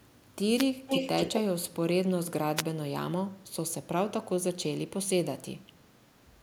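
A wireless microphone noise hit occurs from 0.55 to 0.65 s: the analogue FM radio link fades as reflected signals cancel at the receiver, so its noise surges up as a short swish of static over the speech.

Echo leak follows from 0.87 to 1.41 s, where a copy of the speech returns about 264 ms late at roughly the same loudness as the original. The likely cause is a far-end loudspeaker whose echo canceller let the microphone pickup through.

A second wireless microphone noise hit at 2.56 to 2.63 s repeats the brief static burst as the radio signal dips again.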